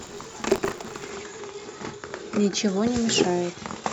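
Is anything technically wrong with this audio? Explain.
Yes. From 0 to 1.10 s there is buffer tearing: the writing program and the playback hardware have slipped so they cross inside each period, leaving a small slice of every buffer, roughly 40 ms stale, spliced in with hard joins. The result is a robotic 86.1 Hz rattle under the speech, which fits a 512-sample buffer.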